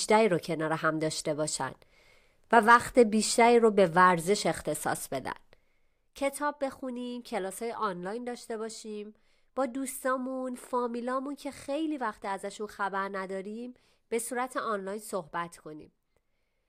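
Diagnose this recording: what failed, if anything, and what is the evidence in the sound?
Zipper noise affects the gain stage, where level is applied in the processing chain after the converter. From 5.29 s to 6.11 s the speech drops by about 10 dB. It does not glide down. It falls in 1 dB steps, about fifteen a second. Each jump puts a small discontinuity in the waveform, so a fine ticking rides on the speech while the level moves. The gain updates without interpolation, which points to per-block updates.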